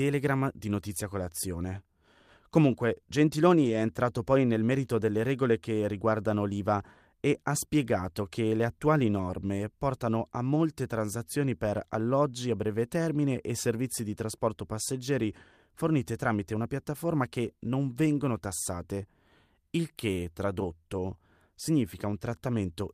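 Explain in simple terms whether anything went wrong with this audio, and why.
Lost packet rebuilt from error correction, at about 3.65 to 3.75 s. A few small chunks of the speech went missing in transit, about 60 ms in all, which fits three packets. Each following chunk carried a rough backup copy, so there's no gap, just a brief grainy, noisier patch.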